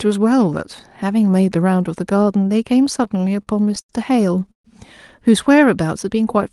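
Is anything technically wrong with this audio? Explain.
Yes, the speech breaks up twice.

Between 2.97 and 3.91 s it drags and stutters, catching on itself eleven times as short held sounds stretch it out. These are repeated stalls (stutter): packets arrived late, the jitter buffer kept running dry, and the receiver extended the last sound for about 219 ms in all, with the longest hold at 90 ms. Nothing is lost.

From 4.51 to 4.66 s the sound holds briefly and then drops to near silence for about 120 ms before resuming where it stopped. This is a call audio freeze, likely caused by packets held up in transit, so the buffer emptied and a 131 ms gap was inserted.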